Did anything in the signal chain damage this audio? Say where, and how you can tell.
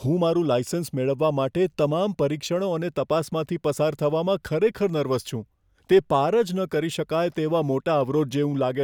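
No, nothing in the chain seems to have touched this speech recording: listening along, there's no sign of damage from any stage, from the wiring and converter right through to playback.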